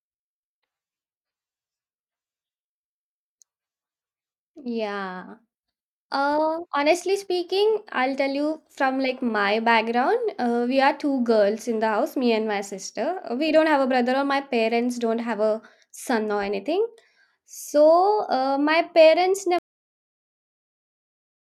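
The final stretch of audio buffers was never written out or played, leaving a cut-off end at 19.59 s. Instead of the speech finishing and fading naturally, it stops mid-sound at that instant and drops straight to digital silence with no decay or room tail. That dead silence then runs for roughly the last 1.9 s until the recording ends, so the closing phrase is abruptly truncated.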